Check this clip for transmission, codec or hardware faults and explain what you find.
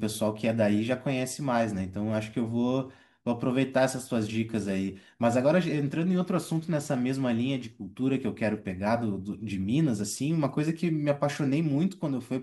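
There's one hardware fault, a mains buzz from 6.18 to 7.68 s. Something like a dimmer, rectifier or unshielded cable is spiking twice per 60 Hz cycle, spraying harmonics up into the kilohertz range, so you get a steady, raspy buzz sitting well below the speech.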